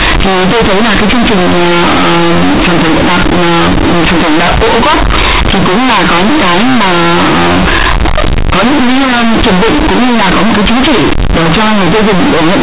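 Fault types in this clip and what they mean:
Companded audio read as linear: The A-law telephone bytes are played as linear 8-bit samples, never expanded. Every sign change swings the output across half its range. Quiet and loud parts come out equally large, giving loud, buzzy distortion throughout and heavy noise in pauses.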